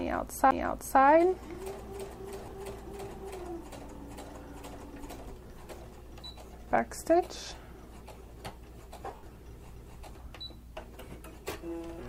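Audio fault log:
0.51 s, CD skip: a tick and a brief mute, then playback resumes from another point on the disc's spiral after the laser jumped tracks. The waveform shows a short gap with a step discontinuity; the spectrogram, a thin vertical broadband line where the content abruptly changes.
2.42–2.52 s, 5.47–5.50 s, 9.11–9.35 s, lost LE Audio frames: 60 ms of frames lost across 100 ms, a 30 ms loss, then 160 ms lost across 240 ms in runs up to about 70 ms. The decoder refills gaps with the last spectrum under random signs, so tones become a noisy smear that fades in the longest run. The spectrogram shows harmonic lines blurring into diffuse noise patches, and the waveform shows ragged, decaying envelopes.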